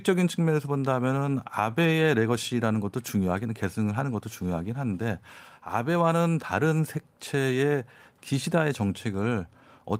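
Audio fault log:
No technical faults can be heard anywhere in the speech, and the signal stays continuous and steady throughout.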